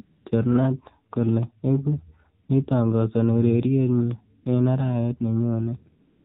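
Speech heard through the AMR narrowband mobile codec: nothing above 4 kHz survives, and the voice has the buzzy, synthetic edge of a vocal-tract model driven by sparse pulses. The damage is plainly audible, which fits one of AMR-NB's lower modes, around 7.4 kbps. That coarse, buzzy texture is what separates it from a simple 4 kHz low-pass, which would sound muffled but clean. AMR comfort noise fills four gaps where the phone stopped sending speech frames. The first runs from 0.02 to 0.26 s (240 ms). Two short ones of 40 ms each fall at 2.44 to 2.48 s, just after "kole eku", and at 4.42 to 4.46 s. The last runs from 6.00 s to the end, about 250 ms. In each, the real background gives way to smooth, steady synthetic hiss that switches in and out abruptly. Unlike a dropout it never goes fully silent, and unlike a noise gate it is not a fade to quiet.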